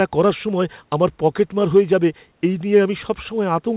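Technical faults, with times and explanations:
Nothing stood out on listening; the speech has the narrow, telephone-like band of a call path, with nothing above 4 kHz, which fits G.711 coding.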